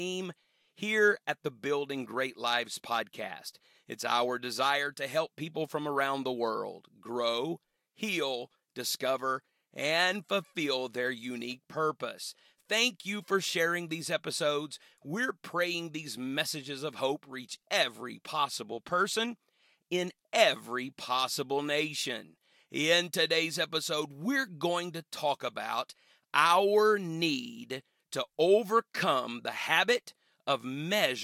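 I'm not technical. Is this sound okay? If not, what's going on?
Yes, nothing stood out as a problem when listening to this recording.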